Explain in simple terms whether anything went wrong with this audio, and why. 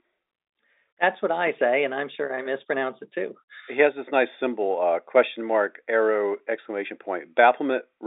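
Nothing went wrong with this audio: its narrow, phone-line sound comes from ordinary telephone coding working as intended.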